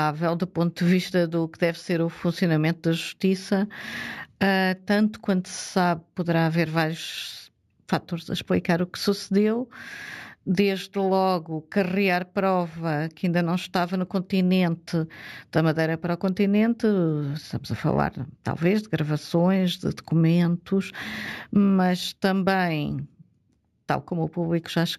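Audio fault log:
Throughout, imaging from linear upsampling: dull top with metallic shimmer on sibilants; straight-line interpolation, fitting a 16 kHz source, left mirror images between 8 and 16 kHz, about 30 dB down.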